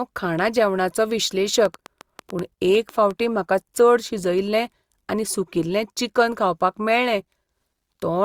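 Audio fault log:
1.65 to 3.12 s: train of clicks. About ten sharp, similar pulses at an uneven 6.2 per second, peaking a few dB above the speech, likely from electrical interference or a faulty connection or power supply. The waveform shows narrow matching spikes, and the spectrogram shows thin vertical broadband lines.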